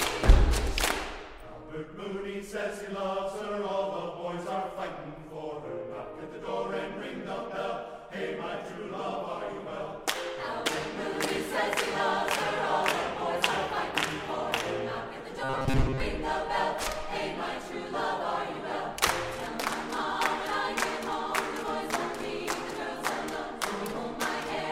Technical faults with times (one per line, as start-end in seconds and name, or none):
15.44-16.00 robotic sound from repeated short buffers